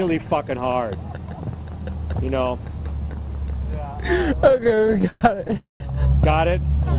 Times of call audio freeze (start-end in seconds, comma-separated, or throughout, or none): 5.57-5.82